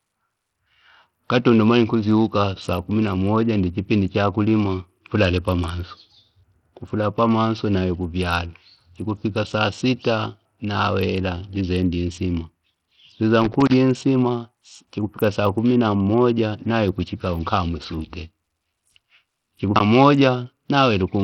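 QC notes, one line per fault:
Throughout: Bluetooth SBC compression. The treble of the speech is thin and flickers in and out, with a gritty, grainy edge and aliasing on the sound. This is likely a starved SBC link, where a low bitrate, around 64 kbps, leaves the upper sub-bands with few or no bits and quantises the rest coarsely.
13.42 to 13.74 s: loose connector crackle. An irregular burst of scratchy crackle rides over the speech for about a third of a second. A worn or dirty contact making and breaking rapidly chops the signal into fragments, and any DC on the line adds pops.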